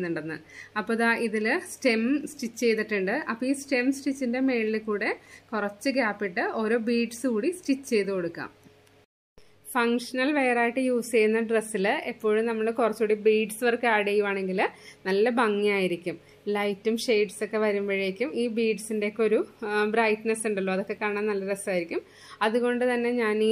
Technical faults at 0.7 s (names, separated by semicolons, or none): none